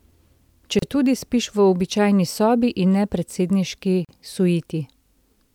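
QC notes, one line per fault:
0.79–0.82 s and 4.05–4.09 s, gap at a join of encoded pieces: the speech briefly drops into silence, first for about 32 ms and then for about 41 ms just after "sobi in ne predsedniški". Each gap has smeared edges, and the sound resumes exactly where it stopped. The audio was encoded in separate pieces and joined without trimming, so each piece's encoder start-up delay and final-frame padding remain as a hole.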